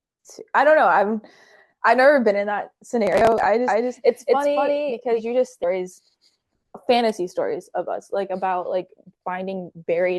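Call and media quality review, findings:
Processor overload crackle, 3.07–3.46 s: gritty tearing over the speech from rapid dropouts. Many consecutive buffer deadlines missed and skipped, consistent with buffers of roughly ten milliseconds.

Doubled audio track, 3.68–5.22 s: an equally loud, dry second copy trails about a fifth of a second behind and starts and stops abruptly. Likely a second capture path or an out-of-step edit.

Stream segment skipped, 5.63–5.66 s: a small blip, then the speech jumps ahead. Likely a stream segment failed to load and the player moved on to the next one.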